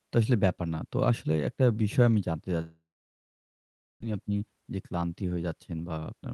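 From 2.61 s to 4.04 s the audio stops. The last sound smears into a brief fading buzz, then about 1.2 s of silence follows, and when the speech resumes roughly a second of it is missing. This is likely a long network dropout. A local mute or an editing cut wouldn't leave that decaying tail, and the lost section never comes back late.

From 4.12 s to 6.23 s the speech runs at about 115 percent speed while its pitch stays the same. This is a jitter buffer speed-up. After the gap the receiver held extra audio and cleared it, about 0.3 s in total, by cutting out short pitch-period pieces over and over. A sample-rate error would speed the sound up and also raise its pitch. The whole clip has the 12 kHz top end of an Opus call path.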